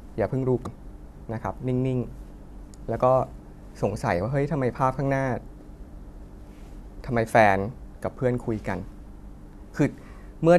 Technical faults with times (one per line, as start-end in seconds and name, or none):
0.63-0.66 damaged data in a compressed stream
5.60 damaged data in a compressed stream